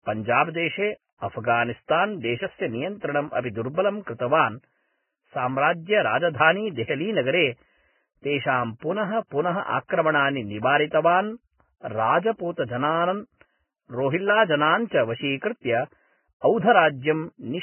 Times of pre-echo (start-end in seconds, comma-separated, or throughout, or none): 4.02-4.07, 6.88-6.90